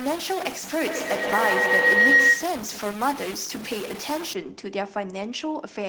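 Speech, with two faults overlapping near the start. From 0 to 4.33 s the sound is distorted, and the pauses fill with noise instead of falling silent. The cause is likely a stuck bit, where one data bit holds a fixed value and about half the samples land off by that bit's weight. The error follows the waveform, which is why quiet gaps get noisy too. A feedback howl runs from 0.81 to 2.62 s. Two devices in one room seem to share the call, so the microphone picks up the loudspeaker and sends it round again. Each pass gains level instead of fading. The sound narrows to a tone around 2 kHz. The loop repeats roughly every 150 ms, and the howl peaks at about 9 dB above the speech before it stops.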